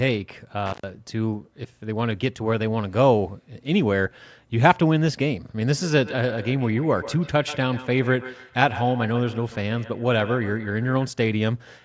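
Speech, with two faults. At 0.66 to 0.9 s, an intermittent contact cuts the sound for about 110 ms. Crackle marks both edges, from a loose cable or plug briefly opening. From 5.77 to 11.2 s, feedback echo between two devices appears. One device replays the other's sound, which its microphone catches again. The repeats come roughly every 150 ms, peaking about 15 dB below the speech.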